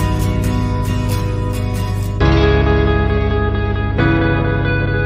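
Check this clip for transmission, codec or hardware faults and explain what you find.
Mains hum at 50 Hz runs through the whole clip, roughly as loud as the wanted sound. A ground loop or nearby transformer couples the power line into the signal, giving a steady low drone. On a spectrogram it shows as a constant horizontal line at 50 Hz with some low harmonics above.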